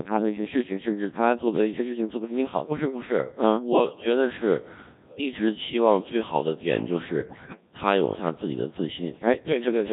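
From start to finish the speech has passed through the Codec 2 vocoder at a very low rate, about 1.3 kbit/s. The encoder keeps only pitch, voicing, energy and a coarse spectral envelope, and the decoder rebuilds the voice from synthetic sine waves rather than the original waveform. The damage is heavy: the voice sounds robotic and buzzy throughout, and anything that is not a single voice comes out mangled.

From 7.20 to 7.61 s there are bit errors on the digital voice radio link, at a rate of around 7 percent. At such a low bitrate every bit steers the pitch, level, voicing or spectrum of a whole frame, so corrupted bits throw those parameters off across a stretch that fits roughly nine frames. The synthetic voice lurches in pitch, loudness and tone colour there, breaking into bleeps, warbles and robotic gibberish.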